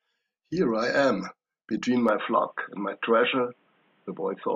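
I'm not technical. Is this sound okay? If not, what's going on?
No. From about 2.09 seconds to the end, the speech suddenly turns duller and more boxed-in, as if heard through a phone, while the loudness stays about the same and no gap separates the two halves. A faint new background noise comes in with it. This is most likely an input switched to a poorer device: the recording jumped to a lesser microphone or headset that carries nothing above about 3.8 kHz, which is what takes away the crispness.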